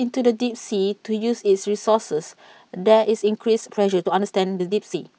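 From 3.05 s to the end, the speech suddenly runs about 1.39 times faster, sounding rushed while its pitch stays put. This is a time-stretched section, likely squeezed by dropping short slices. A plain speed-up would raise the pitch too.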